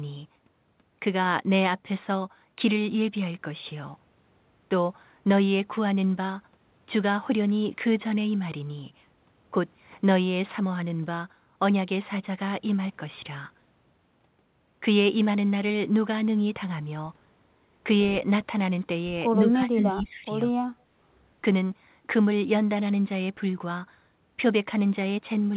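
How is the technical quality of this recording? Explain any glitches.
The recording has three short glitches close together, near the 20-second mark. It sounds like a phone call. Nothing is heard above 4 kHz, which fits a narrowband telephone codec such as G.711.

Speech suppressed in double talk happens from 19.43 to 20.27 s, and again from 20.51 to 20.58 s. In the first stretch the voice dips sharply, by around 25 dB at its deepest. That dip covers most of the stretch. The second is a brief dropout. The likely cause is an echo canceller that heard both sides at once. It could not tell its own talker from loudspeaker echo, so it turned everything down.

Echo leak appears inside the first dip, from 19.48 to 19.52 s. A delayed copy of the voice slips through, about 148 ms late. It is only a little quieter than the direct speech. It likely comes from a speakerphone at the other end. That device's echo canceller missed part of what its microphone picked up, and sent it back down the line.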